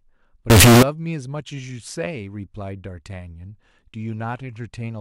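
From 0.5 to 0.83 s the speech turns into a harsh, very loud buzz. This is float read as integer. The samples were likely written as 32-bit float but read as 32-bit integers. The sign and exponent bits then decide each value, not the actual signal level. The waveform goes nearly square, sitting at an almost fixed, high level. Background noise rises to match the speech. Pitch can still be followed through the distortion.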